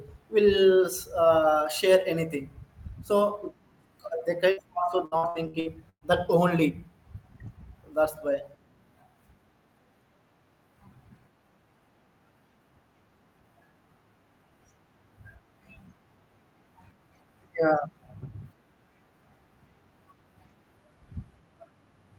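At 4.51 to 4.60 s a burst of packet loss leaves a single hole of about 60 ms. The receiver stretches the last sound across it, fading it out, and then the speech jumps ahead. It is one isolated gap, not a recurring pattern.

From 5.05 to 6.04 s, just before "that only", repeated packet loss gives a robotic sound. Six separate gaps, the longest 115 ms, are each patched by continuing the last sound, so 42% of the span is filled-in audio. The repetition gives the choppy chain, unlike one dropout.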